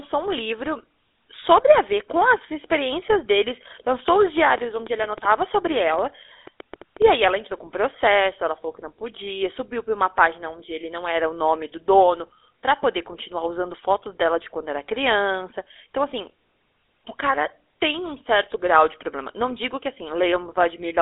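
Throughout the speech there is a buzzy, gravelly roughness, with the sound confined to a narrow band from about 300 Hz to 3.6 kHz and nothing above 3.8 kHz. This is GSM full-rate codec damage, consistent with a 13 kbps stream: pulse-driven vocal-tract modelling coarsens the excitation.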